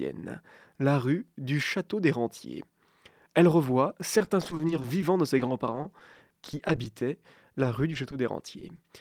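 Repeated packet loss (robotic sound) at 4.18–5.03, 5.38–7.02, 7.63–8.13 and 8.60–8.85 s: rapid gaps of up to 20 ms, each patched by extending the preceding sound, give a choppy stutter rather than one clean dropout.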